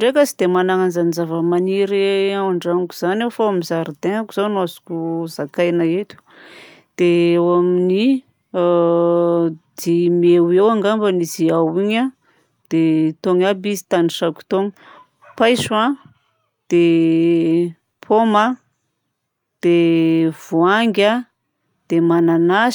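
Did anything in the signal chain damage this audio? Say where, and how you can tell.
No, no stage in the chain has left a mark on this speech recording that a careful listen can pick up. Nothing in the signal points to trouble at the wiring, converter, processing, transmission, storage or playback stages.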